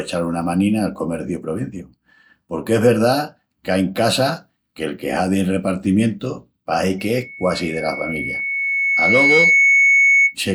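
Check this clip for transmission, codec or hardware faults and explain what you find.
One hardware fault is present: loudspeaker feedback squeal, from 6.98 s to 10.36 s. The microphone is picking up the loudspeaker it drives, and around 2.2 kHz the loop gain rises above one, so that frequency recirculates and reinforces itself on every pass. The result is a pure, piercing tone that swells over roughly two seconds until it sits a few decibels above the speech, and it keeps ringing until 10.36 s, shortly before the clip ends.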